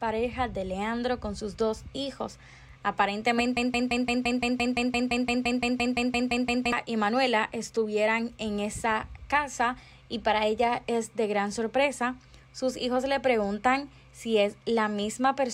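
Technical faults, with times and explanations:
3.57–6.72 s, broken-record loop: one 171.5 ms fragment repeats exactly, back to back, 18 times, and the audio due in that span is lost. Unlike an echo, the copies neither decay nor overlap. A stalled player or stream likely kept resending its last fragment.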